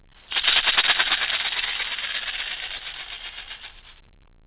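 At 0.42 s and again around 2.77 to 2.81 s there's short concealed packet loss: roughly 20 ms of audio arrived too late, so the receiver extended the preceding sound to cover it, heard as a brief smear or wobble over band-limited audio that stops at 4 kHz.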